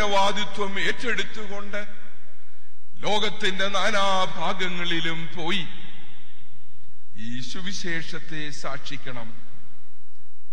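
At 2.12 s there is damaged data in the compressed stream: corrupted bytes make the decoder misread a frame and lose sync until it finds the next valid header, producing a brief glitch. A spectrogram shows a narrow vertical smear of garbled energy, and the waveform breaks abruptly there.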